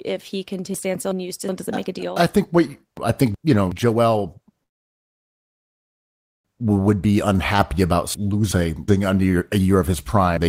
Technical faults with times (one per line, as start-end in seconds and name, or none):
0.74-1.49 chunks out of order
2.97-3.72 chunks out of order
4.63-6.47 call audio freeze
6.66-6.96 jitter buffer speed-up
7.07-7.76 jitter buffer slow-down
8.14-8.88 chunks out of order
10.37-10.48 chunks out of order